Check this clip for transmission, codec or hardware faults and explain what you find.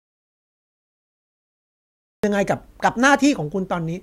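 One fault is present. An audio dropout to silence is already under way when the clip opens and lasts until 2.24 s, where the speech cuts in abruptly mid-flow. The input was likely lost while the recorder kept writing silence. The gap is therefore silence with no room tone, which sets it apart from a natural pause, where some background would remain.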